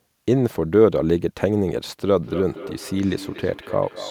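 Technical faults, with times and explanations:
2.17 s to the end, feedback echo between two devices: from here the speech returns at roughly one-fifth-second intervals, about 14 dB below the direct sound, thinner and ringing. A second device in the room replays it into a microphone whose echo canceller cannot remove what that device plays. Spectrogram and waveform show evenly spaced, fainter copies trailing each syllable.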